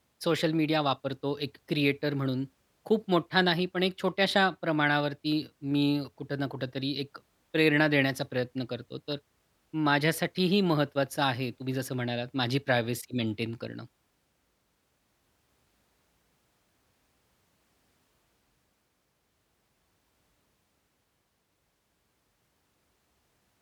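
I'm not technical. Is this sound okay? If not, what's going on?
No. At about 13.04 seconds the recording most likely suffered a dropped buffer (overrun): the computer fell behind and didn't collect a small batch of audio before the sound hardware wrote over it. Roughly a fiftieth of a second of the speech is simply gone, and the audio on either side is stitched straight together. You hear it as the speech jumping slightly ahead rather than pausing.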